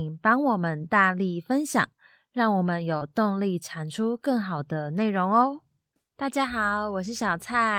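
At about 2.97 to 3.03 s the speech briefly smears, a short wobble where the sound seems to stretch instead of moving on. This is short concealed packet loss: roughly 40 ms of the call arrived too late for the decoder, and the receiver covered the gap by extending the preceding sound for about 33 ms, from its pitch or as shaped noise, before blending back into the real audio.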